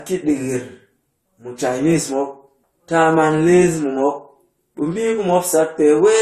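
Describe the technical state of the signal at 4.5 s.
At 4.5 s you're hearing the same thing that runs through the whole clip: transcoding between lossy codecs, likely. The speech has nothing above about 13.8 kHz, and there's a layered smear where one codec's artefacts have been re-encoded by another, so two sets of coding grit sit on top of each other. The character fits an Opus pass at around 48 kbit/s followed by AAC-LC at a similar rate, with the second encoder wasting bits on the first one's debris.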